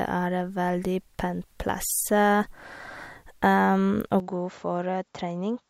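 At 4.2 s the speech turns duller and slightly quieter, with nothing above 7.6 kHz and a faint new noise floor. The input likely switched to a poorer device.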